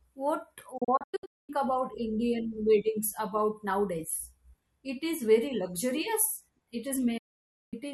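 Digital broadcast dropout at 0.78 to 1.50 s, where the receiver muted on bad frames, fading out in 8 ms across several holes totalling 480 ms. It recurs as one 544 ms gap at 7.18 to 7.74 s.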